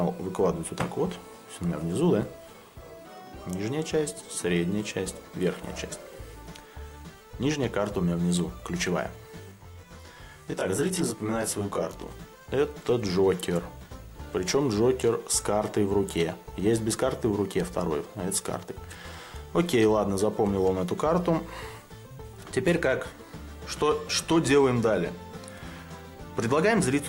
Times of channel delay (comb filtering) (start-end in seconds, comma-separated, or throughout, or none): 9.52-12.10